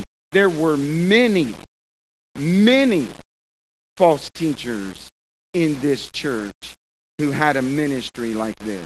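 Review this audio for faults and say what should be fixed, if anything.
Throughout the clip, the speech carries a grainy, signal-following distortion at about 20 dB below the signal, with quiet passages turning rough. The likely cause is low bit depth without dither: requantising to roughly 6 bits by rounding ties the error to the waveform. To prevent this, keep at least 16 bits through processing and apply dither before any word-length reduction.

From 6.39 to 6.49 s, just after "false teachers in this", the audio turns briefly rougher and noisier without a gap. This is a lost packet rebuilt from error correction: the decoder played the low-bitrate copies carried in the following packets, and the 60 ms of rebuilt audio fits three 20 ms packets. To prevent it, reduce packet loss on the network path or raise the Opus forward error correction bitrate so the rebuilt frames are closer to the originals.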